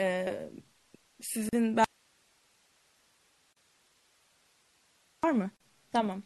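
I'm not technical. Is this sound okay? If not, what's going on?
No. Three problems are audible.

MP3 compression, throughout: the speech sounds watery and swirly, with smeared s sounds and dull treble. This is likely from being squeezed into a small file, where the encoder discards high frequencies and quieter detail to save space.

Gaps at joins of encoded pieces, at 1.49, 3.53 and 5.57 s: brief silences of about 38 milliseconds, recurring every 2 seconds. The audio was saved as separate chunks and stuck back together, and each join kept a sliver of blank padding.

Audio dropout to a faint residue, from 1.84 to 5.23 s: the speech suddenly vanishes for over three seconds, leaving only faint hiss, then abruptly returns. This is most likely because the signal feeding the recording was lost while the equipment kept recording.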